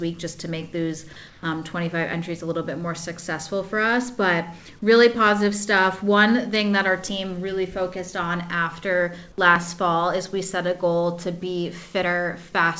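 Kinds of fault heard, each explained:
Comfort noise in place of the background: From 1.28 to 1.43 s, a 150 ms stretch of background loses its texture and turns into a steady, featureless hiss, about 3 dB quieter. The background there sits about 27 dB below the loud parts. The likely cause is discontinuous transmission. The sender went silent during a quiet moment, and the receiver filled the gap with synthetic noise roughly matching the background. Like everything else, this fill stops at 8 kHz.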